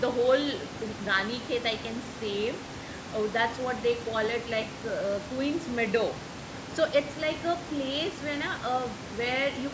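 Nothing goes wrong anywhere in this speech recording; you can hear the room's background noise sitting about 13 dB under the talking, and the call microphone processing tops out at 8 kHz, both just as they should be.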